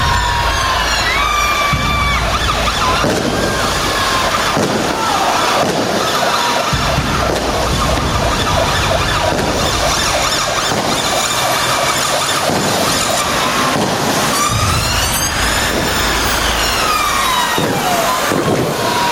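Throughout the clip the gain is pulled down under each loud sound, a swing of around 5 dB, leaving the level squashed and breathing. This gain pumping is likely from gain set far too high, with a fast limiter clamping each peak.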